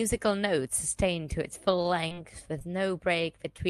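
From 1.71 to 2.19 s there is repeated packet loss, giving a robotic sound. Four short gaps fall close together, the longest about 25 ms. Each is patched by stretching the sound just before it. About a sixth of that stretch is filled in, so the speech turns choppy, with pieces missing.

Short concealed packet loss follows at 2.59 to 2.62 s and again at 3.56 to 3.60 s. Each time about 20 ms goes missing. The decoder extends the preceding sound to cover it, then blends back. Each one is heard as a brief smear or wobble over the speech, carried on an Opus call path whose bandwidth stops at 12 kHz.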